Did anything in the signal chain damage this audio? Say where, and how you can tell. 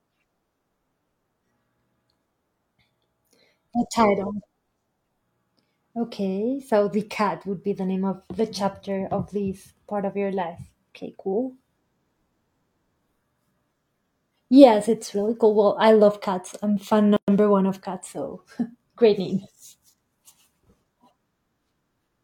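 Yes. Separately encoded pieces were joined at the codec stage without trimming each run's start-up delay and final-frame padding, so a gap at a join of encoded pieces opens from 17.16 to 17.28 s. A gap of about 115 ms cuts the speech, with smeared edges, before it resumes where it stopped.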